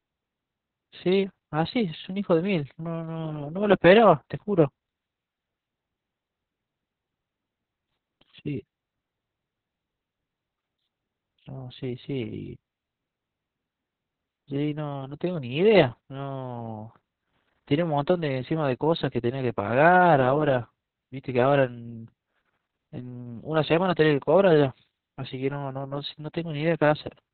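Opus voice compression runs through the whole speech clip, with heavy damage. The sound is cut to narrowband, nothing above 4 kHz, which fits SILK-only coding near 6 kbps. The coarsely coded excitation makes the speech muffled, hoarse and slightly robotic.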